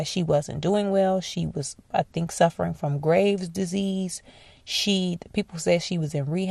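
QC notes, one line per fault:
Throughout: MP2 compression. The speech sounds dull and carries a gurgling, granular grit, with upper frequencies dropping in and out. This is likely MPEG Layer II coding at a rate near 80 kbps, where starved sub-bands are switched off and the remaining bands are coarsely quantised.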